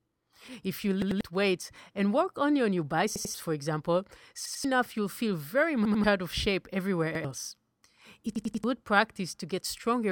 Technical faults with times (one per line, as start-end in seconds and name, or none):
1.02-1.21 repeated buffer
3.16-3.34 repeated buffer
4.46-4.64 repeated buffer
5.85-6.04 repeated buffer
7.15-7.24 repeated buffer
8.36-8.64 repeated buffer